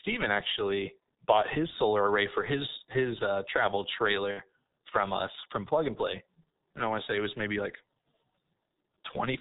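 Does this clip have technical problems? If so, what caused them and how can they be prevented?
Yes. Throughout, the speech passes through the G.723.1 codec at a rate that fits roughly 6.3 kbit/s. Nothing above 4 kHz survives, and the slowly updated 30 ms voice model damages it heavily, leaving it muffled and hoarse with smeared consonants. Prevent it by using a wideband codec at a higher bitrate.

From 4.31 to 4.42 s, VoIP packet loss concealed by the speech codec covers a gap of about 60 ms, which fits two lost frames. The decoder repeats its last pitch and filter at falling gain, producing a fading buzzy tone or coloured noise, and the speech stays weak or distorted briefly after packets resume. Prevent it with a jitter buffer and forward error correction on a less congested network path.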